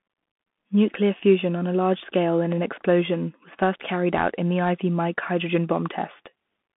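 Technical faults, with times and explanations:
Throughout, Bluetooth CVSD headset codec: speech is held to 150 Hz to 3.5 kHz, with nothing above 3.8 kHz. One-bit steps lag loud highs, making sibilants scratchy over granular hiss.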